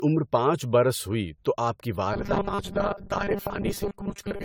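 Generation loss runs through the whole speech clip. The sound is swirly, smeared and hollow, and attacks blur. Nothing is left above 18.9 kHz. This likely comes from repeated lossy AAC-LC encoding, perhaps seven passes, which fits roughly 96 kbit/s each time.

From 2.14 s, right after "ہوئی تو آپ کی", until the end, the voice turns into robotic sound from repeated short buffers. A rigid, metallic 200 Hz buzz sits on it. That points to 5 ms chunks replayed, likely from starved buffers, with about half the audio repeated.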